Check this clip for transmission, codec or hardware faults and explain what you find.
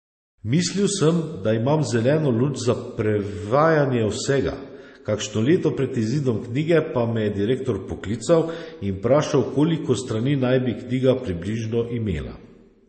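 There's one fault, and it runs through the whole recording. The speech carries MP3 compression artefacts, likely from a low-bitrate MP3 encode, something around 32 kbps by the sound of it. The encoder ran short of bits, so nothing survives above 8.4 kHz and weak spectral lines flicker in and out between frames. You hear dull, swirly, watery speech, with chirpy s sounds and softened consonant attacks.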